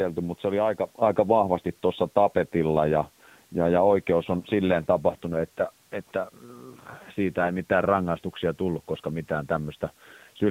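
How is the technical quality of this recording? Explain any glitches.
The technical quality is poor. It is narrowband mobile-call audio with a level jump and a short burst of corruption.

AMR narrowband mobile codec: Throughout, nothing above 4 kHz survives, and the speech sounds buzzy and synthetic, which fits a low AMR-NB mode around 7.4 kbps. A few pulses drive a vocal-tract model, so the degradation is steady and even, unlike the sudden, localized bit-error damage.

Microphone volume stepped up: At 1.02 s the voice and the background rise together by about 4 dB in a single step. The call software raised the input volume, so the new level simply holds. A compressor pumping would instead rise and fall.

AMR bit errors: From 1.54 to 1.66 s the speech turns hoarse and gargly while keeping its pitch and loudness. Corrupted low-priority bits, at a rate of a few percent, misplaced the excitation pulses and skewed the finer parameters. 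A dropout or concealment would mute or smear the sound instead.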